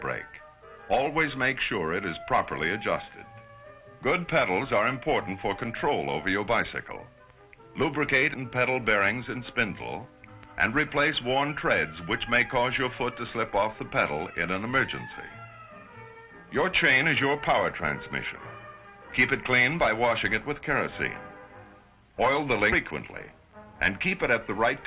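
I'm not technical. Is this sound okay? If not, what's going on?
No. There are two faults close together, about two-thirds of a second apart.

The first is a skip ahead at about 8.34 s. Roughly four-tenths of a second of sound is simply missing, and playback jumps straight to what came later with no silence in between. A dropout would leave a hole or a hiss; here nothing fills the gap, so the two sides are stitched directly together and the sound lurches forward.

The second is a jitter buffer speed-up from 9.00 s to 9.54 s. For that half second the audio runs about 6% fast while keeping its normal pitch, because the receiving end trimmed many tiny slivers to catch up, about a few hundredths of a second in total. Unlike a tape running fast, it doesn't get higher or squeakier. It just sounds briefly rushed.

The sound has passed through a phone-style call connection that carries nothing above 4 kHz.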